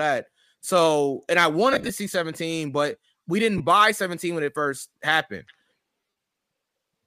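Speech with lost LE Audio frames at three points: 1.73 to 1.91 s after "and I", where about 105 ms of audio drops out in scattered gaps over 165 ms, the longest near 30 ms; 3.58 to 3.61 s after "but we didn't", a brief 22.5 ms gap; and 5.97 to 6.19 s after "when it first happened", about 165 ms missing across 225 ms, the longest near 70 ms. In each gap the decoder repeats the last spectrum with randomised signs, smearing the sound into noise and fading it on the longer runs. The gap lengths fit 7.5 ms frames, likely from an LC3 stream around 64 kbps.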